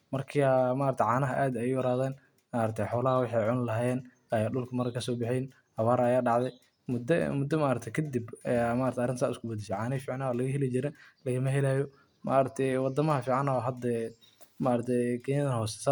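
Nothing in this speech recording jumps out as a technical fault; there's nothing here to point to at any moment.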